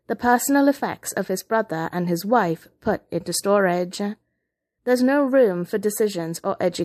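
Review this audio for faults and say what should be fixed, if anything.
Pre-echo at 3.24 s: a long transform block, fitting a 36 ms window, spread codec noise 18 ms before an attack, adding hiss about 10 dB up. Switching to short blocks on sharp attacks would prevent it.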